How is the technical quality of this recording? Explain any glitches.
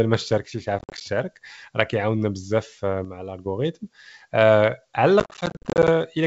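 The recording has two kinds of glitch, each occurring twice, over a G.722 wideband link at 64 kbit/s that adds little audible damage of its own.

From 0.38 to 0.67 s and again from 3.05 to 3.46 s, the level drops abruptly by about 6 dB and then recovers. This is most likely one stereo channel dropping out: the shared content in the mono sum halves, and anything carried only by that channel disappears.

Packet loss on the ADPCM call occurs from 0.79 to 1.02 s and from 5.20 to 5.89 s. In the first burst, 120 ms is missing, scattered across 220 ms. In the second, 320 ms is missing across 680 ms. The longest gap in each is 50 ms, and the bursts suggest roughly ten and thirty lost packets. Each hole has hard edges. The speech then resumes with slight distortion, because the decoder's predictor and step size have drifted from the sender's. It settles within tens of milliseconds.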